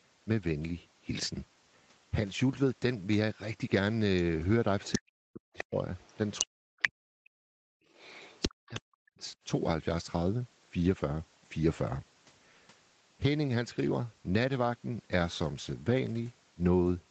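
Other side's voice leaking through appears first at 4.83–4.95 s, about 5 dB below the talker. It returns at 5.58–5.64 s (about 10 dB down), at 5.97–6.45 s and 6.82–6.89 s at roughly equal level, and at 7.93–8.79 s about 15 dB down. The likely cause is loudspeaker playback that the echo canceller left in the microphone signal.

Speech suppressed in double talk cuts the talker's level by up to about 40 dB in pieces at 4.96–5.77 s, 6.42–7.77 s and 8.47–9.36 s, while the far side is also speaking. The likely cause is the canceller failing to separate the two voices and turning both down.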